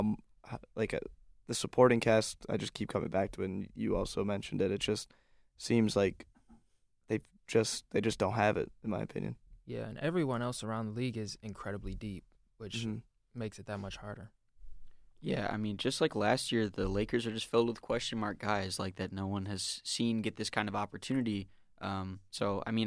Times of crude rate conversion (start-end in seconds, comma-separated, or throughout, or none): none